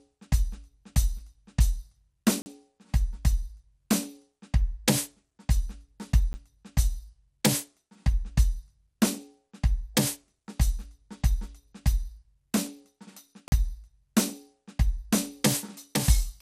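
Across the whole music clip the top end is dull, with nothing above 16.3 kHz and a gurgling, granular edge. This is likely MP2 compression at a low rate around 80 kbps, with upper sub-bands switched off and the remaining bands coarsely quantised.

At 2.42 s, 6.33 s and 13.48 s the output drops to blocks of digital silence, 40 ms, 10 ms and 40 ms long. Zeroed samples cut in and out with no fade, so the 10 ms block is a tick or dip and the 40 ms blocks are short holes.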